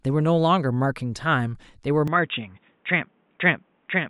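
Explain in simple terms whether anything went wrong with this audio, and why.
At 2.08 s the speech suddenly turns dull and boxy and stays that way to the end, with no gap and no change in loudness. Everything above 3.8 kHz disappears and a faint new background noise appears, most likely an input switched to a poorer device.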